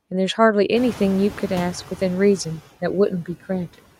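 Throughout the speech, the background dips between phrases and swells back up beneath them. These are noise suppressor artifacts: per-frame band gains push steady noise down by about 14 dB. From 0.76 s to 1.78 s the background comes through much louder, cut by only about 4 dB, before sinking again. This is the noise suppressor catching up. Its noise estimate needs 1.02 s to adapt after the room noise jumps by about 22 dB near the one-second mark, settling about 17 dB below the speech.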